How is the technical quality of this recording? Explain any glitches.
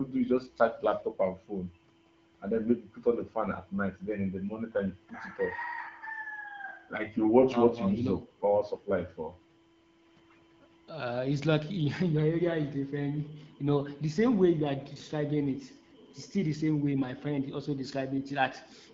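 The technical quality is good, with no glitches to explain; the speech comes through clear over the AMR wideband (HD Voice) codec at 12.65 kbit/s.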